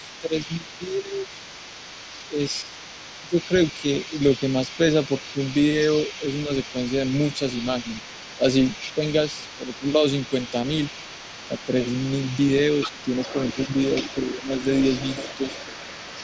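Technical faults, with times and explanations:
Throughout, other side's voice leaking through: a second, fainter voice sits roughly 20 dB below the main talker for the whole clip, likely loudspeaker echo the canceller failed to remove. On a spectrogram it appears as weak, separate harmonic traces beneath the main speech.
0.2–1.29 s, 2.29–5.37 s, 6.47–10.54 s, 11.48–11.72 s and 12.9–14.5 s, speech suppressed in double talk: the main voice dips by around 5 to 15 dB in brief bursts, deepest at 12.9–14.5 s, likely because the canceller turned everything down while both sides spoke. The waveform shows sudden notches in the envelope, and the spectrogram shows faded patches.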